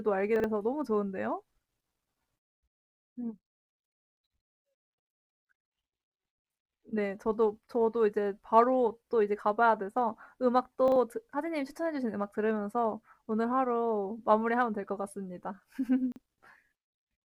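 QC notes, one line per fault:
0.36–0.44 s, 10.88–10.96 s and 16.12–16.20 s, chunks out of order: in each 80 ms span, a 40 ms chunk of the speech arrives one chunk late and plays after the chunk that should follow it. No audio is lost, but the order is wrong, so each spot sounds like a brief jumbled stutter, with three hard joins where the swapped segments meet mismatched waveform edges.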